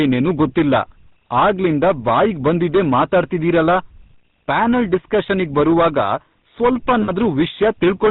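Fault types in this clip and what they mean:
Hard clipping: The level has been pushed about 13 dB past what the chain can carry, so the peaks get sheared flat. That happens on a fair share of the waveform, and the squared tops add a harsh fuzz that rides on every loud stretch of the speech.
GSM full-rate codec: The speech passes through the old GSM coder, which rebuilds the vocal tract from a model driven by sparse, evenly spaced pulses. Nothing comes through above 4 kHz, and there's a plainly audible buzzy, gravelly grain, consistent with the 13 kbps full-rate codec.
Lost GSM frames: From 7.02 to 7.11 s the decoder loses its input and keeps replaying the last good frame. What you hear is a short, rough metallic ring in place of the real sound, about 60 ms, which points to three dropped frames.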